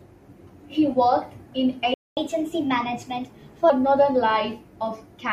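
At 1.94 s the speech cuts out abruptly and the output sits in silence until 2.17 s, a gap of about 229 ms. This is a playback stall. The audio does not fade or glitch into the gap; it simply stops mid-flow and then resumes. The likely cause is the player running short of buffered data, or its output thread being held up, so nothing reached the device for that interval.

From 2.17 s to 3.70 s the player catches up at higher speed. It runs the backlog at 1.15 times normal rate by resampling, so timing and pitch rise together. The speech sounds hurried and lifted by roughly two semitones, slightly chipmunk-like, for about one and a half seconds. At 3.70 s the delay has been recovered.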